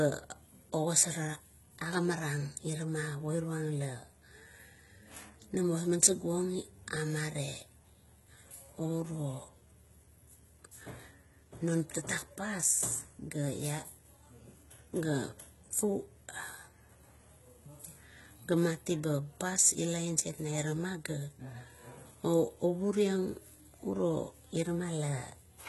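Throughout the speech, the likely cause is HE-AAC compression at a very low bitrate, consistent with about 16 kbps, rebuilding the treble by copying lower bands upward. The damage is heavy: s sounds turn gritty and metallic, and nothing remains above 11.8 kHz.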